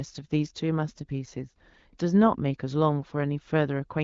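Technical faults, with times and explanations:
No technical faults can be heard in this speech clip. It comes through the AMR wideband (HD Voice) codec at 12.65 kbit/s, where the coding leaves only light traces on the sound.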